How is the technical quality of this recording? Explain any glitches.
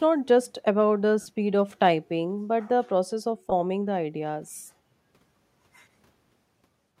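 The speech is marred by two short dropouts from lost LE Audio frames, with light codec damage underneath.

From 1.21 to 1.26 s, and again from 3.50 to 3.52 s, the Bluetooth link dropped LC3 frames. The decoder concealed each gap by repeating the last spectrum with randomised phase signs, so the voice briefly turns into a hazy, noisy smear instead of a clean cut. The 50 ms gap fits about five 10 ms frames. The 20 ms gap is a quick blur.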